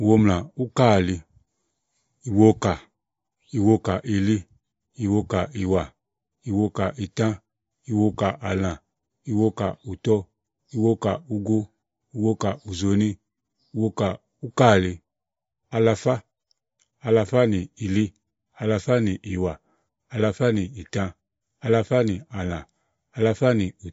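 MP3 compression runs throughout the speech and is the likely cause of what is heard: nothing remains above 7.6 kHz, so the treble is cut off. The encoder was starved of bits, which fits a rate near 36 kbps, and its damage is plainly audible.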